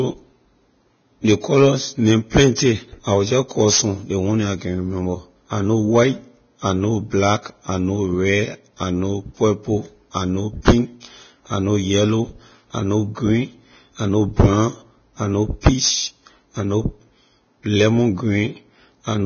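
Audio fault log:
Throughout: Vorbis compression, likely cause. Nothing is present above 6.6 kHz, and the remaining treble is hissy and grainy, with roughened tones and softened consonant onsets. This is heavy codec damage, consistent with a very low bitrate near 18 kbps, where fine spectral detail is replaced by noise.
2.55–2.58 s: Pre-echo. A short hiss about 27 ms long precedes a sharp speech onset, making the attack sound smeared. The transform block spreads its quantisation noise evenly, so noise sized for the loud onset also fills the quiet interval just before it.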